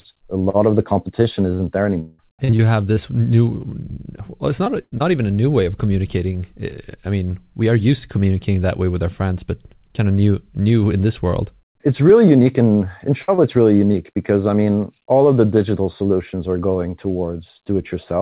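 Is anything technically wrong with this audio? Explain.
Yes, the speech breaks up several times through a call path whose sound stops at 4 kHz, which fits narrowband G.711.

From 2.0 to 2.98 s the speech turns choppy and robotic. This is repeated packet loss: five gaps, the longest 186 ms, each patched by stretching the preceding sound, so nearly a third of that stretch is synthetic fill.

At 4.82 to 4.94 s and 13.22 to 13.30 s a burst of packet loss leaves a held buzz or a fading hiss. The first burst also drops to silence for about 50 ms. The receiver extended the last sound and turned it down, and the speech resumes with roughly 100 ms and 60 ms missing.

Brief smears or wobbles at 4.64 to 4.68 s, 4.98 to 5.02 s, 13.36 to 13.40 s and 13.92 to 13.96 s are short concealed packet loss. About 20 ms of audio never arrived in time each time, and the decoder filled the hole before blending back in.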